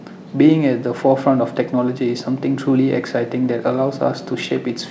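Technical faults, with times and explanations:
The speech has come through a call path working as intended, with nothing above 8 kHz, a wideband limit that fits a G.722 codec at around 64 kbps.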